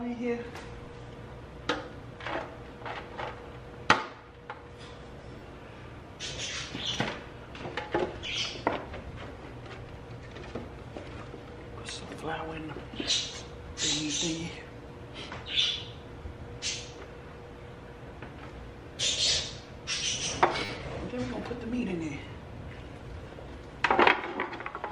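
The audio has two repeated buffer stutters, at 5.39 to 5.41 s (piece heard three times) and 20.65 to 20.69 s (five times), each repeating a segment that fits a 10 ms buffer. Unlike a dropout, no audio goes missing, so it sounds like a brief buzz rather than a gap.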